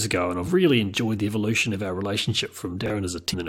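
At 2.86 to 2.90 s there's chunks out of order: a 20 ms piece of the speech turns up one chunk late, so that moment sounds jumbled. Then at 3.32 to 3.35 s, damaged data in a compressed stream trips the decoder, which loses sync and leaves a quick glitch before it recovers.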